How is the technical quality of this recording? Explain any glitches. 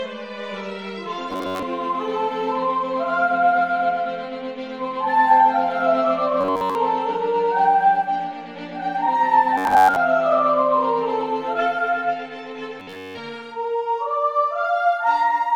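The recording has four short glitches of robotic sound from repeated short buffers, at 1.31 to 1.63 s, 6.41 to 6.75 s, 9.58 to 9.96 s and 12.80 to 13.17 s. Each turns the sound into a stiff, metallic buzz at 93.8 Hz that only loosely tracks what's underneath. The likely cause is audio arriving late, so the software loops a tiny chunk of roughly 10.7 ms to fill the gap. At 6.41 s the loop covers the whole stretch; in the others, most of it.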